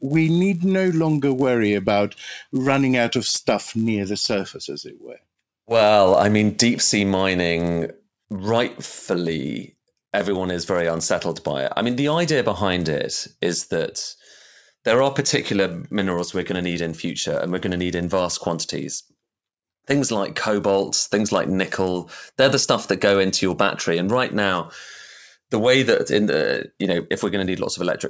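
Speech throughout carries a 100 Hz buzz from a resampler restarted on every block. Each 10 ms block, likely converted from 24 kHz to 16 kHz, gets edge errors. The waveform shows small steps every 10 ms, and the spectrogram shows regular vertical striations and 100 Hz harmonics wherever speech is present.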